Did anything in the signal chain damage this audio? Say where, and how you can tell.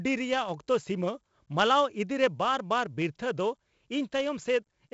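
Yes, 4-bit ADPCM compression at the codec: gritty hiss rises and falls with the speech throughout, and nothing is above 7.7 kHz, which fits a 64 kbps stream. Steady background noise wouldn't follow the level like that.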